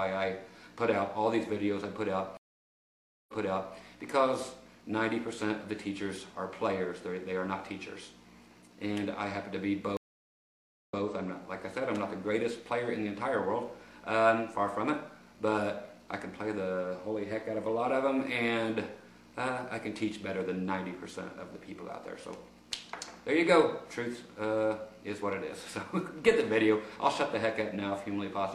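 At 2.37 s the sound drops out for about 0.91 s, then picks up 0.46 s earlier than where it stopped, repeating a short stretch; at 9.97 s the same happens, with about 0.92 s of silence and a 0.14 s step back. Both are stream reconnects: the connection broke, the player restarted its decoder mid-stream, and the server resent a burst of recent audio.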